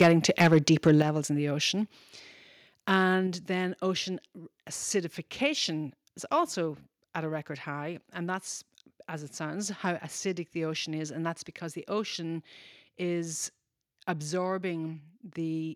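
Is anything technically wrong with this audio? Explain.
Yes, there are two problems, both at the start of this speech clip.

Microphone overload occurs from 0.01 to 0.08 s, from 0.4 to 0.57 s and from 0.87 to 0.9 s. The input level is likely set too high, so peaks exceed the converter's ceiling by about 5 dB, or about 1 dB in the last burst. The tops of the wave are sheared off. This gives loud syllables a harsh, crackly edge. On a waveform the peaks look flat-topped. In the worst burst about a tenth of the samples sit at the limit. A spectrogram shows smeared vertical splashes of high-frequency energy.

The microphone volume is stepped down at 0.02 s, 1.02 s just before "in the ocean", and 3.27 s just before "then ocean acidification is". The cuts are about 3 dB, 7 dB and 4 dB. This is likely the call software reacting to those distorted peaks by lowering the input gain in single jumps. 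Speech and background both drop abruptly. The waveform envelope shrinks like a stair step, and the spectrogram dims evenly across all frequencies at once.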